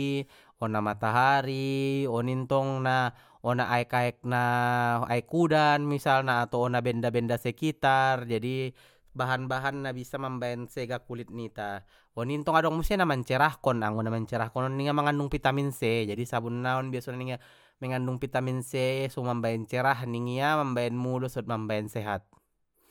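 No technical faults can be heard anywhere in this speech recording; the signal stays intact and stable all the way through.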